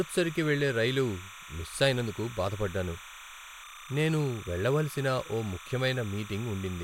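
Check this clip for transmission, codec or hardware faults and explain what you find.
One fault runs through the whole recording: timecode bleed. A steady chirping warble sits behind the speech from start to finish, about 15 dB below it. Linear timecode at 29.97 frames per second has leaked in from a neighbouring track or cable, its square wave flipping between tones near 1 kHz and 2 kHz.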